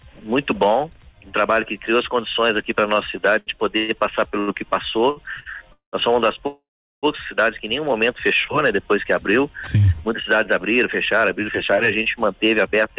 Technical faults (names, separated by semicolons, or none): repeated stalls (stutter); short stall from a late packet; call audio freeze; jitter buffer speed-up